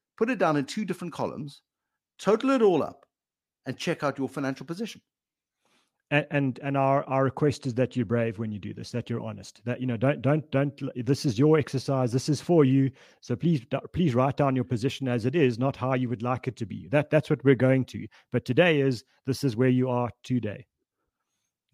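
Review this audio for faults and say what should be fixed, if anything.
Nothing here needs fixing: the speech signal holds steady throughout, with no technical faults to correct.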